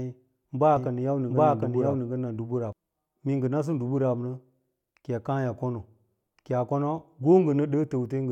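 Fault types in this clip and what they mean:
Doubled audio track: from 0.77 to 2.73 s a second full-band copy of the speech runs roughly 0.7 s behind, at about the same level, with no decay or room colour, cutting in and out abruptly; likely a slower second capture path or an edit holding two offset copies.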